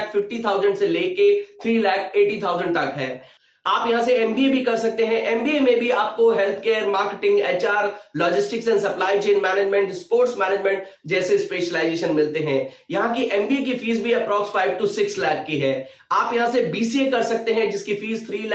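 No technical faults can be heard anywhere in this audio. It has come through a call's microphone processing and an Opus call path, and nothing reaches above 8 kHz, which fits the bandwidth that call codec was working at.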